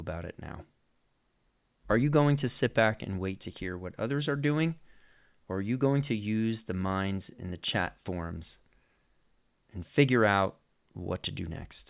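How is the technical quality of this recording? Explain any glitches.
No glitches are audible here.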